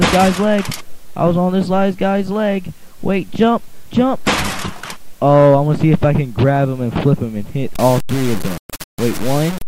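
From 7.74 s to the end, low bit depth without dither: grainy distortion tracking the sound, likely from undithered truncation to about 4 bits. The waveform shows stair-steps; the spectrogram shows signal-following broadband grit.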